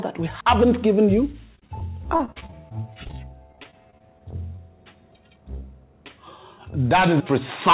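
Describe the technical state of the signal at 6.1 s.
At 6.1 s there is a short concealed packet loss, spanning 6.08 to 6.12 s. About 20 ms of audio never reached the decoder in time, and the receiver filled roughly 21 ms by extending the preceding sound, either from its pitch or as shaped noise, before blending back into the real signal. It is heard as a brief smear or wobble. The surrounding band stops at 4 kHz, which fits a G.711 mu-law call codec at 64 kbps.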